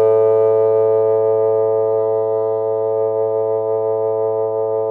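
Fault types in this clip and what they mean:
No faults detected; the audio path shows nothing to flag.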